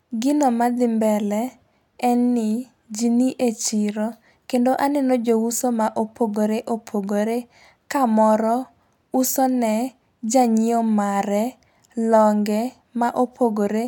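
A speech recording with sharp, uneven ticks at a steady rate of about one every 0.7 s, some twenty in all from 0.49 s to 13.68 s. These are word clock ticks: the receiving device runs on its own clock, about 30 ppm off the sender's, so at each slip one sample is dropped or repeated.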